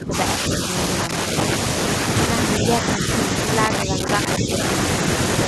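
Speech with two kinds of fault. Short gain dips appear at 0.0–0.14 s, 2.60–2.65 s, 2.96–3.06 s, 3.85–4.07 s and 4.39–4.52 s. The deepest, at the very start, is roughly 15 dB. The middle pair are only a few decibels, and the last two around 10 dB. These are likely speech suppressed in double talk: an echo canceller, unable to tell this talker from returning loudspeaker echo during overlap, pulls the whole signal down. On a waveform they show as brief notches in the envelope, and on a spectrogram as momentary fading across the speech bands. Loose connector crackle runs from 1.04 to 1.55 s and again from 3.64 to 4.70 s, overlapping two of the dips. It sounds like an irregular scratchy burst as a poor contact makes and breaks. On a waveform it appears as jagged spikes and chopped segments, and on a spectrogram as scattered vertical broadband streaks.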